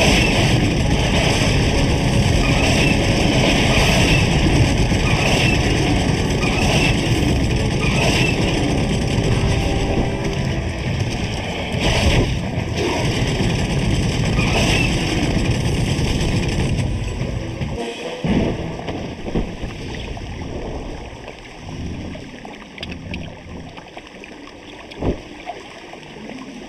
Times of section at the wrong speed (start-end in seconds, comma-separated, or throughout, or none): none